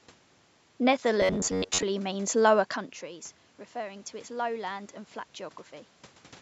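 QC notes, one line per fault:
1.22–1.84 s, robotic sound from repeated short buffers: just before "means lower" the speech becomes a rigid, metallic buzz at a fixed pitch near 94 Hz that still loosely tracks the speech. The likely cause is audio arriving too seldom, so the playback side repeats the last snippet of roughly 11 ms, one period of that buzz, over and over. Around two thirds of this stretch is repeated material, while the real audio it replaces is skipped.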